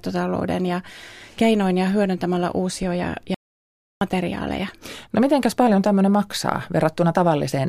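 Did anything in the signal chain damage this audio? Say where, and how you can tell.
Yes. Audio dropout to silence at 3.34 to 4.01 s, after "ja hyödyntämällä uusia ja". Speech cuts to silence with no room tone, likely from a lost input link.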